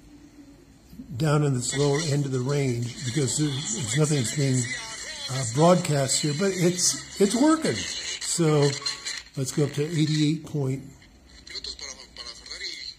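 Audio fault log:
Nothing stood out on listening; no fault could be heard anywhere in the audio.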